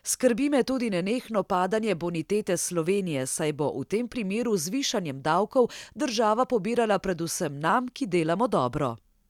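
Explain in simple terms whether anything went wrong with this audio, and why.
Nothing went wrong; no faults can be heard.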